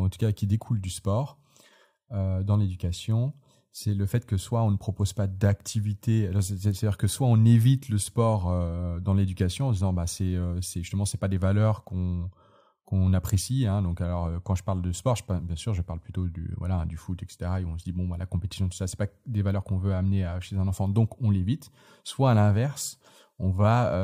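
Nothing technically wrong can be heard in this recording of speech, and no faults turn up anywhere in the signal.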